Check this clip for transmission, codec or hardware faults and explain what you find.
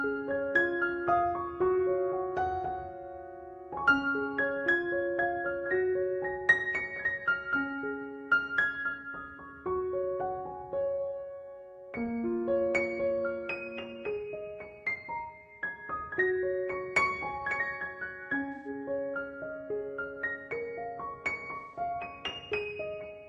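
Three brief dropouts with concealment stand out. At 8.89 to 8.94 s, 18.53 to 18.68 s and 21.55 to 21.79 s the sound turns smeared and noisy. This is AAC frame loss with concealment: the decoder rebuilds lost frames of about 43, 128 and 171 ms from the last good spectrum, consistent with one, three and four missing frames.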